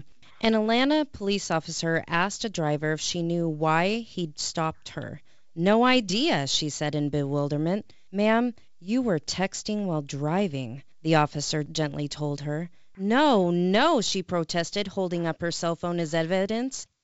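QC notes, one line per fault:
No faults to note in this speech, which comes through G.722 wideband telephone coding at 64 kbit/s.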